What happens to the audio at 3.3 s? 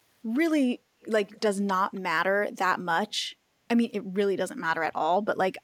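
Nothing goes wrong at 3.3 s; the speech carries on intact through that moment.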